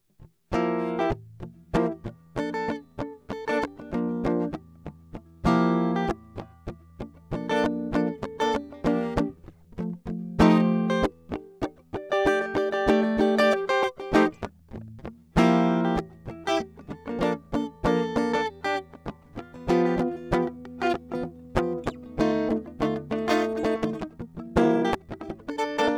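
A time-stretched section runs from 23.54 s to the end of the music at 25.97 s, where the pace suddenly jumps to about 1.69 times its earlier speed while the pitch holds steady. The likely cause is software squeezing this final stretch to fit a shorter length, discarding small slices of audio to compress time without raising pitch. Those removed fragments leave the passage sounding hurried.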